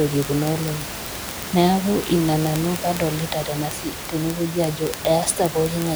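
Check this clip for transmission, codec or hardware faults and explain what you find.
One hardware fault is present. From 0.11 s to 5.95 s, word clock ticks sound about every 20 ms: an unlocked receiver clock, roughly 0.1 percent off, drops or repeats one sample, producing sharp, buzzy clicks over the speech and the room noise about 10 dB below it.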